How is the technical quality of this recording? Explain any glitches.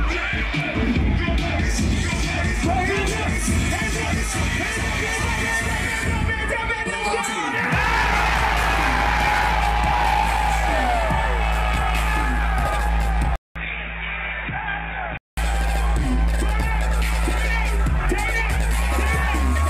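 One glitch stands out. At 13.36 s the input was likely switched to a poorer device, which stays in use until 15.37 s. The replacement microphone or headset passes a much narrower band, with nothing above 3.8 kHz, so the sound turns dull and boxy for those two seconds. The switch opens with a 200 ms silence, the level drops by a few decibels, and a faint new noise floor sits well below the signal.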